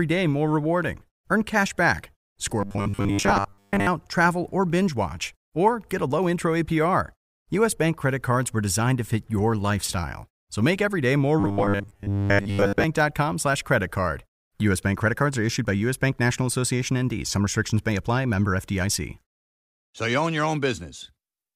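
A rigid, metallic 100 Hz buzz marks this speech clip from 2.61 to 3.87 s, after "cash back", and from 11.40 to 12.84 s, after "make every day more". This robotic sound likely comes from repeated short buffers: a 10 ms chunk replayed while most real audio was skipped.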